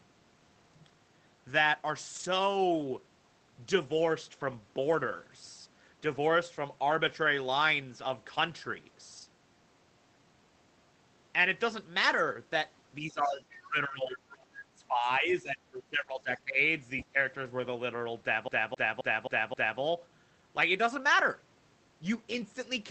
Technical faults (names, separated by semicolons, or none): lost packet rebuilt from error correction; speech suppressed in double talk; other side's voice leaking through; CD stuck on one turn